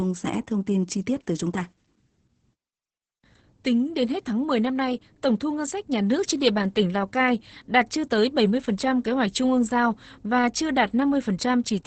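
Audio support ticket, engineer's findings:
Opus voice compression, whole clip. Speech muffled, hoarse, slightly robotic. Nothing above 8.9 kHz. Sound points to SILK linear-prediction coding in wideband mode at a low bitrate, around 10 kbps. Coarse excitation coding causes heavy damage throughout.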